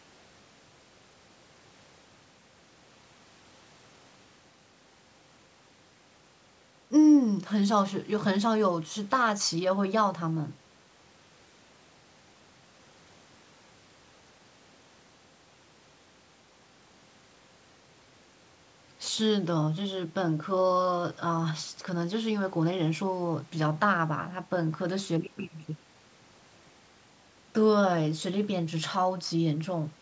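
Nothing here counts as a fault: the speech simply carries the usual signs of a call's microphone processing, with the lowest bass trimmed away and nothing above 8 kHz, which is just how that path is meant to sound.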